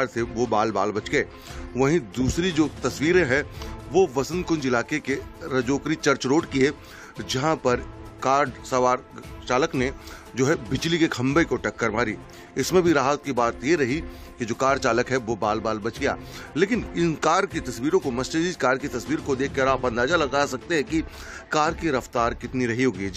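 Nothing goes wrong anywhere in this clip, so there's no fault to point to at any moment.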